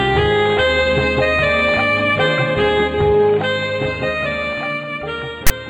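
At 5.47 s a harsh burst cuts in, lasting until 5.51 s. This is file tags played as audio. A block of text tags was read as samples. The text produces a loud, lopsided rasp. Its zero padding then drops briefly to silence. The edges are abrupt.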